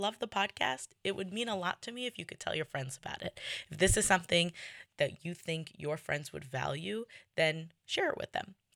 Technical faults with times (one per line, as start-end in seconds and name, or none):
3.23-4.86 sudden gain jump